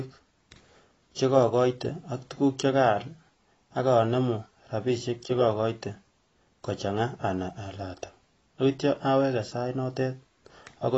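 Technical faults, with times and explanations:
Throughout, AAC compression: the speech sounds dull and smeared, with a warbling, fizzy edge on sustained sounds and sibilants, and nothing above 7.9 kHz. This likely comes from coarse AAC-LC coding, which fits a low bitrate near 24 kbps, lowering the cut-off.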